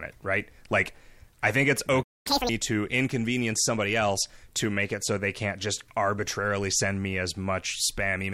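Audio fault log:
2.03–2.27 s, playback stall. The speech cuts off mid-flow and the output falls silent for about 0.24 s. Then the sound picks up again. A gap like this is likely the player running out of buffered data, or its playback thread being blocked. Either way, nothing reaches the output until the player recovers. The break does not come from the recording. It comes from the delivery path, so it lands abruptly, not at a natural pause.
2.27–2.49 s, catch-up at higher speed. Right after the silence, the speech rushes forward at double speed. The pitch jumps by around ten semitones, giving a chipmunk-like quality. This happens because the player resamples its backlog to play it faster, and resampling raises speed and pitch together. The aim is to recover time lost during the stall. By 2.49 s the rushed stretch ends.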